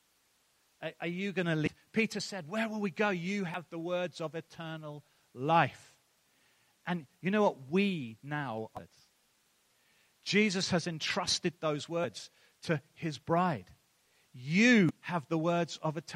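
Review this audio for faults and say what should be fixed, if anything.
Damaged data in a compressed stream causes brief glitches at 1.66 s after "are you going to", at 3.54 s just before "the words of eternal", at 8.77 to 8.79 s, at 12.03 s after "has entrusted those", and at 14.89 to 14.91 s. At each point corrupted bytes made the decoder misread frames and resync. Verifying transfers with checksums and re-fetching the source from an intact copy should prevent this.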